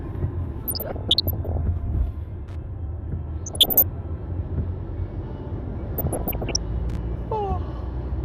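From 0.63 to 1.58 s, again from 3.46 to 3.84 s and from 5.97 to 6.56 s, DAB burbling appears. At around one percent bit errors, corrupted MP2 sub-band samples and scale factors get through, so sub-bands blip with noise and jump in level for up to a frame. Around those stretches, at 2.48 to 2.56 s and 6.89 to 6.98 s, short bursts of loose connector crackle break in as a contact makes and breaks, giving dry, irregular scratching rather than the burbling.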